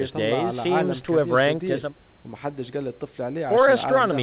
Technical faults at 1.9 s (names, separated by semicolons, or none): none